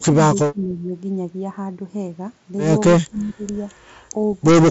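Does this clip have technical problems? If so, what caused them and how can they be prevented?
Yes. The speech dips three times: 0 to 0.17 s by about 20 dB, 0.52 to 0.92 s by about 15 dB, and 3.09 to 3.43 s by about 10 dB. This is likely speech suppressed in double talk. The echo canceller mistook the talker for loudspeaker echo while the far side spoke, and attenuated both. Improving double-talk detection and easing residual-echo suppression prevents it. The Bluetooth mSBC headset path, with nothing above about 7.7 kHz and light grain, is not part of these drops.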